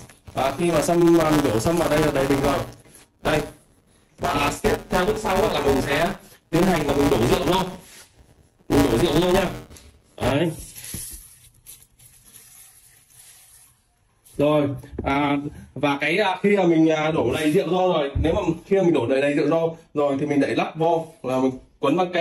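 The writer and reader of the playback ring buffer have slipped out of step, producing buffer tearing from the start to 10.32 s. In each period a small slice, roughly a sixth, holds audio from about 10 ms earlier, butted against the current material with hard joins on both sides. Those joins repeat at 172 Hz, which fits a 256-sample buffer, and give the audio a steady robotic buzz that is present only while there is signal.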